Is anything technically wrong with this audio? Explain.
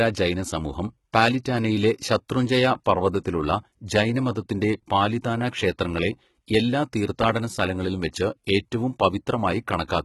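Yes. Throughout the speech, s sounds are gritty and metallic and nothing is present above 11.8 kHz. This is likely heavy HE-AAC compression at a rate near 16 kbps, where the treble is rebuilt from copied lower bands rather than coded.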